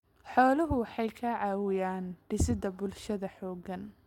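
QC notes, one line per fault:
Nothing to flag here; I listened all the way along this speech recording and didn't catch a single problem worth a note.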